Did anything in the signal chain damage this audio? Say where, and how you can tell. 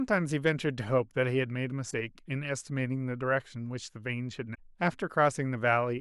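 Yes: damaged data in a compressed stream at the codec stage, short glitches at 1.87–1.94 s and 4.51–4.59 s. The decoder loses frame sync and searches for the next frame header, unlike a silent dropout.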